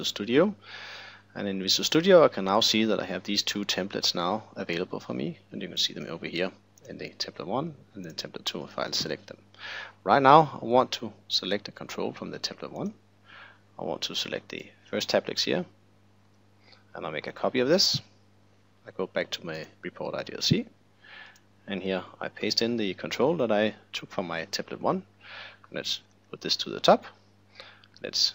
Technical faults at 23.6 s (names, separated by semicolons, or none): none